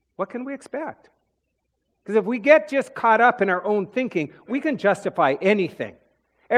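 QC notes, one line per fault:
No faults found in this speech clip. Nothing here needs a QC line.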